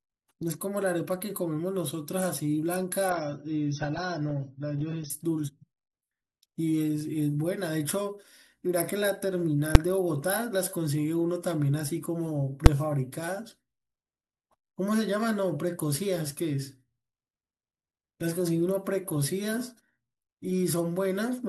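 From 3.10 to 5.10 s the speech drops to an adaptive stream at a lower bitrate. The connection slowed, so the player switched to a cheaper encoding of the same audio. The treble vanishes above about 6.3 kHz, and codec artefacts grow. The switch in and out is abrupt, and there is no gap. The dullness points to a drop from around 96 kbit/s AAC to roughly 27 kbit/s.

At 9.75 s and again at 12.66 s there is a sharp bang. Each is invalid numbers at full scale. A calculation produced infinite or invalid values, and these were clamped to the maximum output level. The block lasts only 5 ms each time, so the loud pops at its start and end merge into a single hard click. Nothing of the speech survives inside those blocks.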